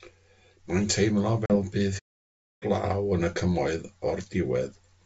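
Packet loss on the ADPCM call strikes at 1.46 s, cutting a sharp-edged hole of 40 ms, roughly a couple of packets, that ends at 1.56 s. Because the decoder's adaptive predictor and step size lose track of the sender's, the speech comes back slightly distorted, then settles within tens of milliseconds.

A playback stall follows at 1.98 s. The sound breaks off mid-flow and stays silent for 0.62 s before resuming at 2.63 s. The likely cause is the player running out of buffered data or its thread being blocked until it could recover.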